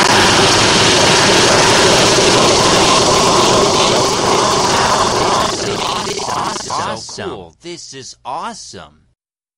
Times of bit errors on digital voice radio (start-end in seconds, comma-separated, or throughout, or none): none